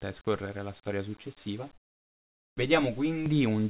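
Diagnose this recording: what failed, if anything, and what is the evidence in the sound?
Call processing: from 1.73 to 2.57 s, comfort noise in place of the background. Steady, featureless hiss about 14 dB quieter, not the silence of a dropout, likely from discontinuous transmission.

Call processing: onset clipped by the voice detector, 2.47 to 2.57 s. The sound's first 100 ms is missing and noise fills it, an abrupt start rather than a gate's fade-in.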